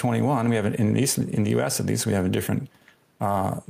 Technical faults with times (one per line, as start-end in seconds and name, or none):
0.00-3.69 gain pumping